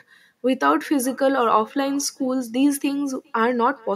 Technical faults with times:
0.00-3.96 echo with no canceller

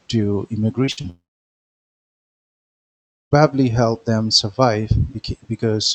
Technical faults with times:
0.85-1.06 short concealed packet loss
0.91-0.99 burst of packet loss
1.10-3.33 long network dropout

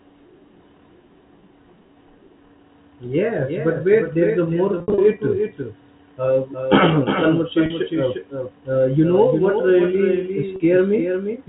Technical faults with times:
0.00-11.48 doubled audio track
4.78-4.98 packet loss with pitch repetition
7.66-7.70 packet loss with pitch repetition
10.56-10.60 packet loss with pitch repetition

